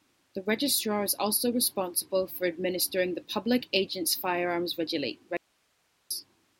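At 5.37 s the speech cuts out abruptly, an audio dropout to a faint residue. For about 0.74 s only hiss remains, roughly 40 dB below the signal. The likely cause is a lost input while the downstream path stayed live. Speech returns at 6.11 s.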